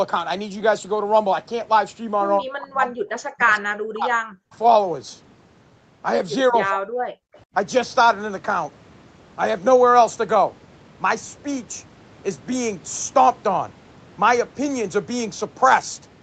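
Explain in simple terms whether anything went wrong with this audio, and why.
Speech suppressed in double talk, from 2.4 to 3.07 s, 3.34 to 4.55 s and 6.5 to 7.19 s: the voice sinks almost to silence, likely because the echo canceller muted it while both sides spoke. Echo leak, from 4.53 to 4.57 s: a very faint copy of the voice returns about 184 ms late, likely loudspeaker sound the echo canceller failed to remove.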